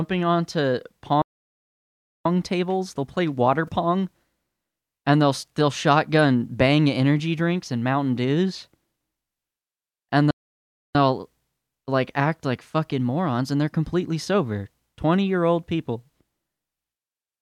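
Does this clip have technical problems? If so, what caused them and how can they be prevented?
Yes. This speech clip has two kinds of technical fault.

There are two playback stalls. The speech goes silent from 1.22 to 2.26 s, for about 1.03 s. It goes silent again from 10.31 to 10.95 s, for about 0.64 s, just before "they'll like act like". The likely cause is the player running out of buffered data or its audio thread being blocked. A larger playback buffer and an audio thread that never waits on other work would prevent this.

A corrupt frame was decoded at 3.67 to 3.73 s, right after "play water". Flipped bits in the compressed data reached the decoder, which played them anyway. This puts a short burst of energy at wrong frequencies across a few frames, peaking around -30 dBFS. Checking each frame's integrity and concealing damaged frames instead of decoding them would prevent it.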